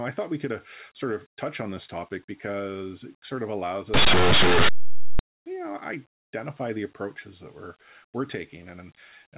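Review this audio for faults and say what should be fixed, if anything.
From 3.94 s to 5.19 s, after "it sort of allows" and before "you know identify the", the sound turns to very loud, harsh distortion. This is linear audio read as companded. Plain linear 8-bit samples are being expanded as if they were mu-law codes. Small values just to one side of zero map to the loudest outputs, while those on the other side stay quiet, so the waveform becomes loud noise. To prevent it, tag the segment's coding correctly and decode linear 8-bit data as linear, never through a mu-law expander.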